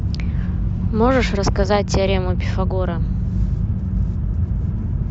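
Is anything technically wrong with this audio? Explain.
No, nothing is technically wrong with this speech clip. No fault can be heard anywhere in the recording.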